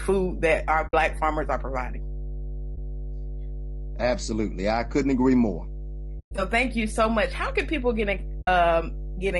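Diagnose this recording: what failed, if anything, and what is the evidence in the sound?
Mains hum sits under the whole clip. It is a steady 50 Hz tone with low harmonics, strong, roughly 10 dB below the speech. The stage is analogue wiring. A ground loop or nearby transformer is coupling the power line into the signal path.

The speech sounds rough and grainy throughout. Noise fills the gaps between harmonics, and the top band sounds thin and synthetic. This points to the codec stage. The likely cause is low-delay AAC compression (AAC-ELD) at 32 kbps, whose short frames resolve pitch poorly.

AAC frame loss with muting causes three soft-edged holes and one brief dip. They fall at 0.87 to 0.94 s, after "that our" and before "farmers are providing", at 2.75 to 2.78 s, at 6.19 to 6.33 s after "I couldn't agree more", and at 8.41 to 8.48 s after "can people get in". The stage is the network. 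Lost frames were zeroed, and the gaps of 60, 20, 120 and 60 ms fit 20 ms frames.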